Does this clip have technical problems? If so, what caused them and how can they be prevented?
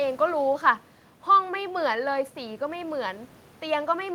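No, nothing's gone wrong on the technical side here; the only extra sound is a bit of room background sitting about 28 dB below the speech, which is just part of the recording.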